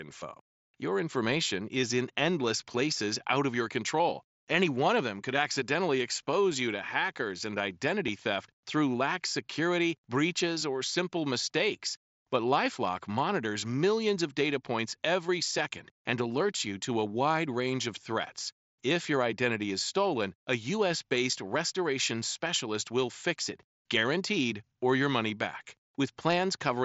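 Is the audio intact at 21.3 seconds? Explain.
No: at 21.32 s, concealed Bluetooth headset packet loss patches about 7.5 ms with a copy of the preceding waveform. It's nearly hidden, without the silent gap of a plain dropout.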